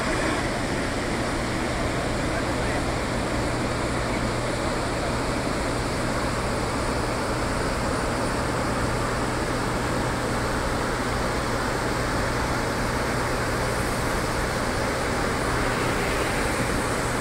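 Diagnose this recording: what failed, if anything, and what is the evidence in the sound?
A ground loop or nearby transformer in the analogue wiring injects mains hum: a steady 60 Hz tone throughout, roughly 10 dB below the sound.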